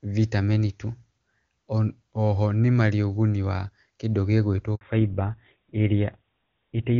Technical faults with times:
4.75-4.81 handover gap
4.81-6.99 fallback to narrowband

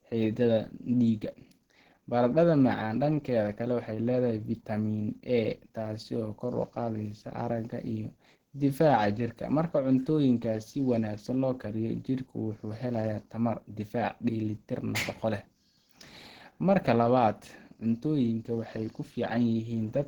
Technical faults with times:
0.00-20.08 Opus compression

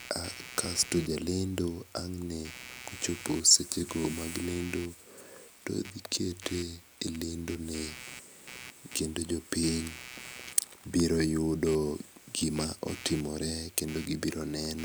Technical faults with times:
0.00-14.85 computer activity noise

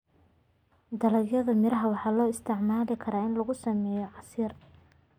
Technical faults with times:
2.95-5.18 channel delay (comb filtering)

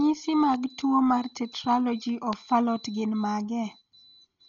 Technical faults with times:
0.00-4.49 Dolby Digital compression
2.33-2.35 loud pop

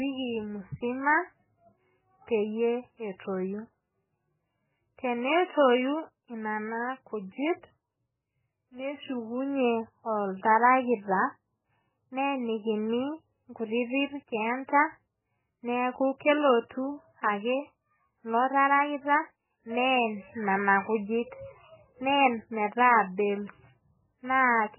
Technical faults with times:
0.00-24.79 MP3 compression

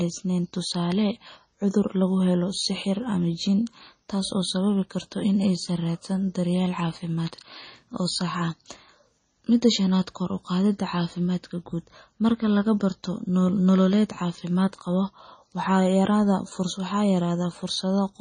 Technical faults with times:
0.00-18.21 MP3 compression

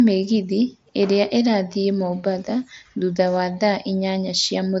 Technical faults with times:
none

